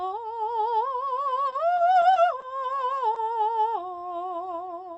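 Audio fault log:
1.50–2.44 s: repeated packet loss (robotic sound). Across this stretch of music, audio packets go missing five times in quick succession. The longest hole lasts about 20 ms, and roughly a tenth of the span is filled in. Each time, the receiver stretches the last sound it heard to cover the gap. Because one patch follows close on another, the music turns choppy, with small pieces dropped out.
3.14 s: short concealed packet loss. About 20 ms of the music fails to reach the decoder in time. The receiver covers the hole by carrying the preceding sound forward and then blending back into the real signal. The result is a brief smear or wobble. The music travels over the call path, where the Opus codec limits the band to about 8 kHz.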